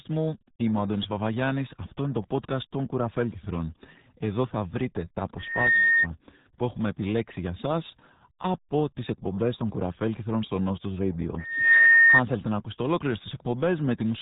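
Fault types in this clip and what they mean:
RealAudio 14.4 codec: a low-rate dial-up speech codec running at 8 kbit/s throughout the clip, with heavy codec damage; nothing above 3.8 kHz survives, so the speech comes across muffled and gargly, its upper detail replaced by the coarse texture of very low-bitrate coding.
loudspeaker feedback squeal: a microphone picking up its own loudspeaker, with loop gain above one at 1.8 kHz, so that tone feeds on itself. It swells over about 0.3 s after "θα βρείτε τα", sits roughly 10 dB above the speech, and ends before "που έχουμε επιλέξει για".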